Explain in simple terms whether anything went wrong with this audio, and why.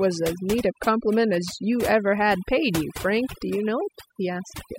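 Overdone noise removal runs through the whole clip: the cleanup stripped out quiet parts of the speech, leaving twinkly near-silence behind it.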